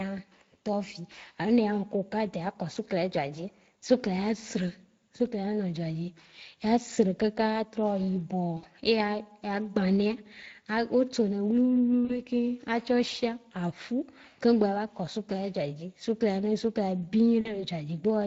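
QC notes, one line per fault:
Throughout: Speex codec. The speech has a plainly audible hoarse, noisy grain, with a thin, rough upper band. The CELP coder has too few bits to model the excitation cleanly, which fits a Speex setting around 20 kbps.
8.57–8.65 s, 12.05–12.22 s, 17.41–17.65 s: VoIP packet loss concealed by the speech codec. Each gap, about 60 ms at the first and 40 ms at the others, becomes a smeared fade. The decoder repeats its last pitch and filter with falling gain, then needs time to recover.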